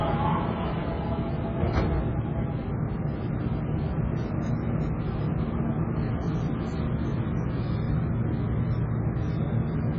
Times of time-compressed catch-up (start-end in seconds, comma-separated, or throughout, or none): none